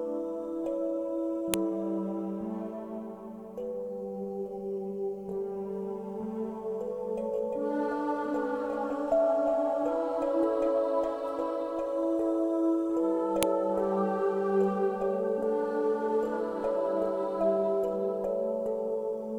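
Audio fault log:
1.54 s and 13.43 s, file header played as audio: two sharp, loud snaps, each a single instant, landing hard regardless of what the sound around them is doing. That's the header of a joined WAV piece left in the stream, so a few dozen bytes of metadata get read as sample values. Those values bear no relation to the waveform, so you get an abrupt jump and a click at each join.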